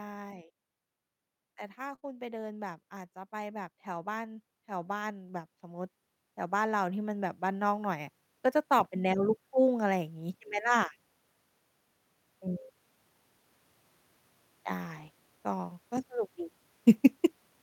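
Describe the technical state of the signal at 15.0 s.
Lost packets rebuilt from error correction, 14.99 to 15.09 s: the following packets carried low-bitrate copies that the decoder played, so the speech continues without a gap but sounds rougher and noisier for about 60 ms, which fits three separate packets.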